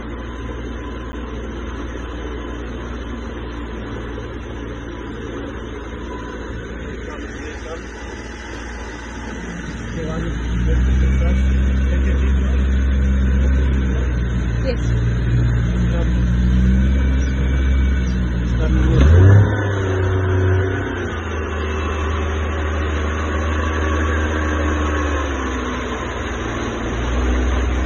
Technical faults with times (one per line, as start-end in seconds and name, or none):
1.12 block of digital silence